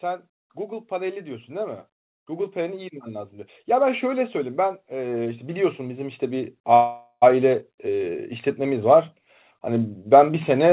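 From 0.05 s right through to about 9.09 s there's automatic gain rising: the gain control judges the input too quiet and keeps pushing it up, so the speech and the background swell together by about 15 dB. At 6.74 s there's a call audio freeze lasting about half a second. The last sound gets dragged out into a fading buzz or hiss with a brief silence, likely because the jitter buffer ran dry, and then at 7.24 s the speech picks up exactly where it left off. Over the whole clip you can hear the band stop at 4 kHz, which fits a G.711 call path.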